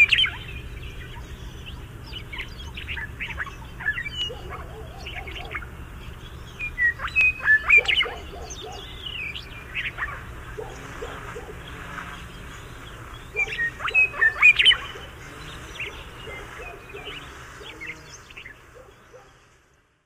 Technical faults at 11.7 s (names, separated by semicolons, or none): clock drift buffer slips